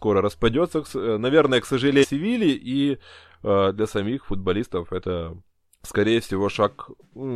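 At 2.00 to 2.05 s and again at 4.98 to 5.02 s, the speech breaks into a brief glitch from damaged data in the compressed stream. The decoder misreads corrupted frames, loses sync and searches for the next frame header, each disruption roughly 45 ms long.

At 6.03 s a single sharp click sounds, likely from dropped samples, perhaps just one. The waveform jumps abruptly to a later value, and on a spectrogram it appears as a thin vertical line spanning all frequencies.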